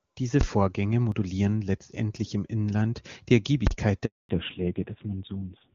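At 0.41 to 0.43 s, a 20 ms block shows invalid numbers at full scale. A calculation produced infinite or undefined values that were clamped to the maximum, so the output jumps to the rails and holds there. Because the block is so short, the ear hears one hard bang rather than two separate pops. On a waveform it is a flat-topped rectangle pinned far beyond the speech peaks. On a spectrogram it is a bright vertical stripe across every frequency.

At 1.12 s and again at 2.17 s, the sound skips abruptly, and no silence is left behind. This is likely a dropped buffer (overrun): the samples were overwritten before the program collected them, and the two surviving edges were spliced together. Roughly 10 ms is missing at the first point and around 20 ms at the second. The waveform shows a sudden discontinuity at each splice, and the spectrogram shows a thin broadband tick where the harmonic contours jump.

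From 3.67 to 3.71 s, a second full-scale block of invalid numbers runs 40 ms. Here the onset and release register as a loud pop at each edge with nothing audible between them. It appears as a solid slab at one extreme value, far beyond the speech peaks, and a wider broadband column than the first.

A handover gap follows from 4.05 to 4.29 s. While the call moved between networks, no speech frames arrived, so the sound fades within a few tens of milliseconds and stays silent for 240 ms. The waveform shows a short decay into a flat line, and the spectrogram goes blank across all bands.

From 4.29 s to the end, there is a fallback to narrowband. Before this point, the HD Voice codec at 23.85 kbit/s keeps the top of the band intact with no more than faint coding damage. After it, the spectrogram shows a hard ceiling at 4 kHz with empty space above. The sound turns muffled and gritty, which points to a low-rate narrowband codec somewhere around 5.9 kbit/s.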